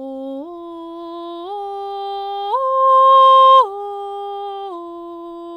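No technical faults are audible.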